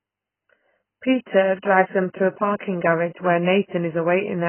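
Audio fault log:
throughout, AAC compression: the speech was likely coded as AAC-LC at very few bits, fitting about 12 kbps; the encoder cuts everything above 3.1 kHz and starves the remaining bands, so the sound is dull and smeared, with a heavy warbling, fizzy texture on sibilants.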